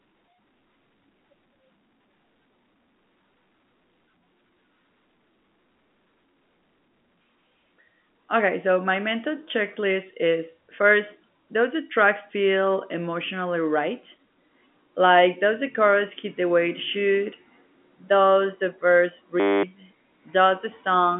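At 19.4 s the computer or its audio driver froze while the sound hardware kept replaying the same 10 ms stretch of its ring buffer. This system hang loop lasts until 19.63 s. Because that tiny slice repeats exactly a hundred times a second, the speech turns into a steady 100 Hz buzz, and roughly a fifth of a second of audio is lost. The buzz stays within the narrow G.711 telephone band, with nothing above 3.8 kHz.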